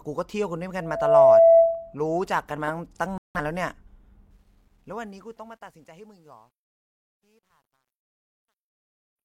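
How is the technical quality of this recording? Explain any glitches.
Three faults mar the recording: a feedback squeal, a broadcast dropout, and a gritty fade at the end.

From 0.81 to 1.95 s there is loudspeaker feedback squeal. The microphone hears its own loudspeaker. At 665 Hz the loop gain passes one. The tone swells in under half a second and sits well above the speech, about 15 dB louder.

From 3.18 to 3.39 s there is a digital broadcast dropout. The receiver lost valid frames and muted until clean ones arrived. The speech cuts to silence for about 170 ms, which fits roughly four lost frames. That stretch of speech is simply gone.

From 4.31 s to the end, at 9.25 s, there is truncation distortion on the fade. The fade was computed at 11 bits without dither. From 6.0 s onward the quiet tail turns gritty.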